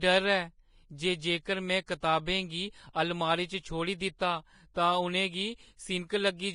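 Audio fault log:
Throughout: Vorbis compression, heavy. The speech sounds hissy and grainy, and its consonant onsets are smeared. Nothing remains above 10.6 kHz, so the top end is dull and closed off. The likely cause is a low-quality Vorbis encode, and the damage fits a rate of around 30 kbps. At that rate the encoder quantises the upper bands very coarsely. Fine detail there turns into noise of similar energy, which roughens tones and blurs attacks.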